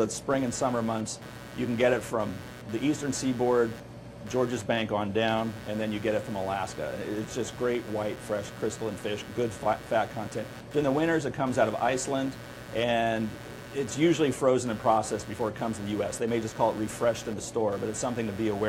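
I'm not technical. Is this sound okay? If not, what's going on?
No, there's computer activity noise running through the whole clip: a buzzy chirping, pulsing about 150 times a second. It's the computer's own electrical work leaking into the audio wiring, so it follows what the machine is doing rather than the sound itself.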